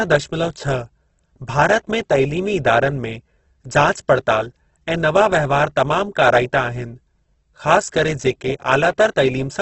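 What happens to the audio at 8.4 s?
At 8.4 s the speech is still carrying the heavy Opus compression heard across the whole clip, likely from an encoder starved of bits, at a rate that fits roughly 12 kbps in its CELT music mode. With too few bits, the encoder fills bands by folding lower ones or inserting noise, so the speech turns grainy and rough. The bandwidth is narrowed to wideband, leaving nothing above about 8.2 kHz.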